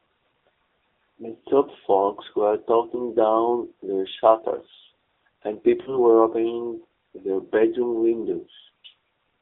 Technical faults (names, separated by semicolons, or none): AMR narrowband mobile codec; lost AMR speech frames